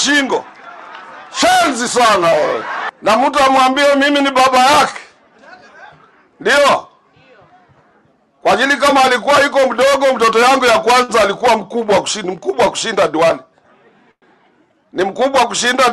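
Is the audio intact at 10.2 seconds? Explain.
Yes, the audio is intact at 10.2 seconds, with nothing at that moment beyond the ordinary character of the call path it passed through.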